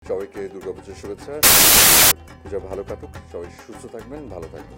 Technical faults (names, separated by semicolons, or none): samples built from the wrong bytes